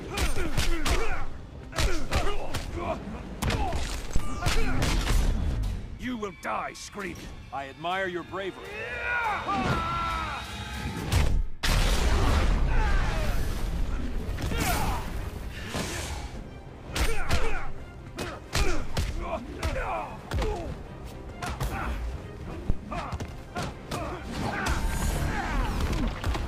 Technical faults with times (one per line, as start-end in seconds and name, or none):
4.16-4.45 phantom power thump
22.70-22.80 phantom power thump